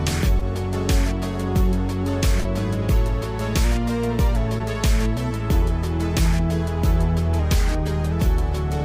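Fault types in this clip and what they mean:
short concealed packet loss: Pieces of the stream 20 to 40 ms long arrived too late to decode, and the receiver filled each gap by extending the preceding sound before blending back. Near 0.39 s, 2.41 s and 4.59 s this leaves brief smears or wobbles.
drift correction step: Clock-matching software likely jumped the playback rate to rebalance its buffer. From 3.64 to 4.36 s the sound runs 6.1% fast and about a semitone sharp, then snaps back. From 7.39 to 8.12 s it runs equally slow and flat.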